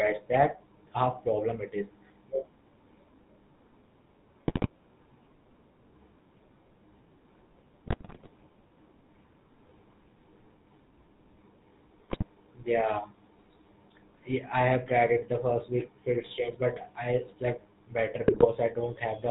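A buzzy, gravelly roughness runs through this speech clip with nothing above 4 kHz, the sound of the GSM full-rate codec, which fits a 13 kbps GSM link. Brief squawks, pops and gargling break out at 4.48 to 4.68 s, 7.86 to 8.28 s, 12.08 to 12.25 s and 18.28 to 18.47 s. These are GSM bit errors, where corrupted filter, pitch or gain values distort frame after frame while each bad patch lasts.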